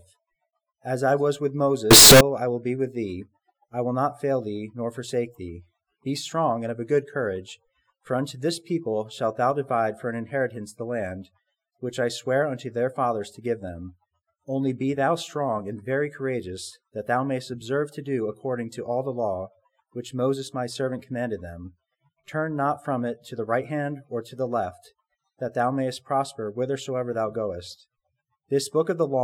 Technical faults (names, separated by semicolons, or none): float read as integer